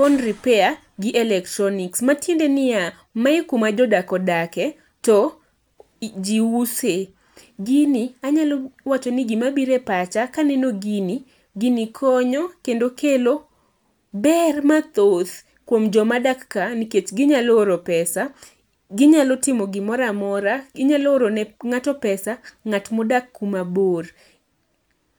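No technical faults are audible anywhere in the recording.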